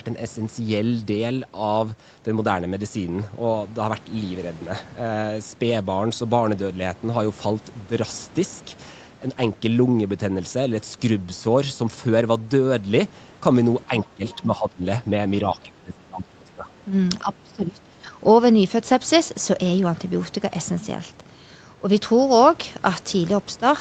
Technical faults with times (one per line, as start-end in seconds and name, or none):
13.88-14.84 speech suppressed in double talk
14.30-14.43 other side's voice leaking through
15.44-16.73 speech suppressed in double talk
17.22-18.19 speech suppressed in double talk